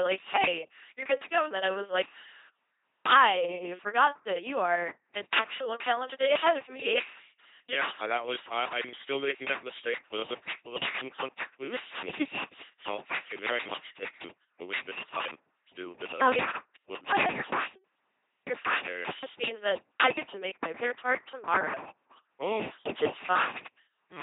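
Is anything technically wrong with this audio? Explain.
Yes. The speech has passed through an LPC-10 vocoder for its whole length, and the damage is heavy. The codec discards the actual waveform. In its place it sends a filter of up to ten poles and a voiced-or-unvoiced flag, at a rate that fits 2.4 kbit/s. The decoder then excites that filter with either a buzz or noise, which makes the speech sound mechanical and robotic, with stray buzz or hiss where the voicing choice misfires. On a spectrogram, nothing appears above 3.8 kHz. Smeared formant bands sit over rigid, evenly spaced harmonics or flat noise.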